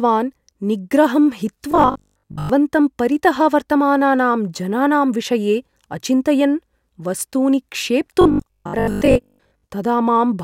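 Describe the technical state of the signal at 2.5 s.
At 2.5 s the speech is just leaving a stretch of robotic sound from repeated short buffers, running from 1.72 to 2.50 s. It is likely caused by audio arriving too late, so roughly two thirds of the signal is replaced by looped 20 ms segments, forcing a rigid, metallic 50 Hz buzz.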